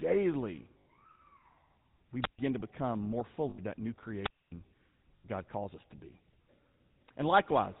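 Throughout, the speech has a buzzy, gravelly roughness with nothing above 4 kHz. This is the sound of the GSM full-rate codec, consistent with its 13 kbps, modelling the vocal tract and exciting it with sparse, regularly spaced pulses, and the damage is plainly audible.

From 0.78 to 0.86 s, the sound freezes into a rough, metallic ring lasting 80 ms. These are lost GSM frames: each missing frame was filled by repeating the last good one.

From 2.21 to 2.39 s, just before "to become more", there is a short swell of hiss, then a hole of near silence of about 136 ms before the speech returns. This is a wireless microphone squelch dropout: the FM radio signal faded until the receiver's squelch muted the output.

The same 80 ms metallic hold from lost GSM frames returns from 3.50 to 3.60 s, between "to become more" and "that new", and again from 5.16 to 5.26 s.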